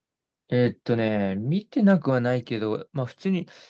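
A speech recording with one fault. At about 1.08 s, the speech and the background noise both drop by about 3 dB at once and stay at that lower level. The drop is a single clean step, not a gradual fade. The likely cause is a microphone volume stepped down by the call software, which lowered the input gain when it judged the level too hot. The audio passed through an Opus call path, so content above 8 kHz is absent.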